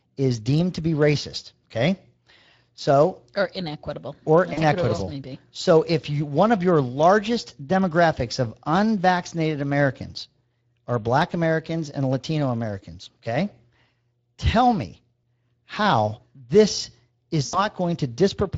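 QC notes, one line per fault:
throughout: Speex codec. The whole recording of speech carries plainly audible Speex damage at a bitrate that points to roughly 20 kbps. This CELP coder models each frame with a vocal-tract filter plus an excitation signal, and at this rate the excitation is coarsely coded, so the speech comes across noisy and hoarse rather than clean. The hoarse, grainy texture sits on every phrase because the coding loss applies to every frame.
4.53 to 4.61 s: VoIP packet loss concealed by the speech codec. About 40 ms of audio, which fits two lost 20 ms frames, went missing, and the decoder filled the gap by carrying forward its last pitch and filter with falling gain. That stretches the sound into a brief buzzy or coloured-noise smear that fades, and the speech stays weak or distorted for a short stretch afterward while the decoder's state rebuilds.
15.22 s: VoIP packet loss concealed by the speech codec. 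A single dropout of about 20 ms, consistent with one lost frame, occurs just before "how this". The decoder extrapolates from the preceding frame at reduced gain, giving a tiny smeared or buzzy blip, and the onset of "how this" sounds weakened because the next frames are decoded from the concealed state.
17.45 to 17.61 s: VoIP packet loss concealed by the speech codec. Right after "how this", about 80 ms is lost, which fits four consecutive frames. The decoder keeps repeating its last pitch and filter while lowering the gain each frame, so the sound drags into a buzzy tone or coloured noise that audibly fades out. With this longer gap, the speech that follows stays weak or distorted for tens of milliseconds as the decoder recovers.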